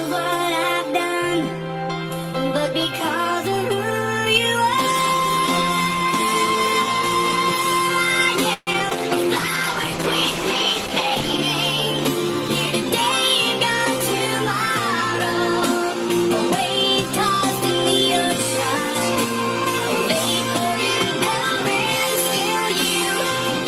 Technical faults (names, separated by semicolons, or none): repeated packet loss (robotic sound); call bitrate drop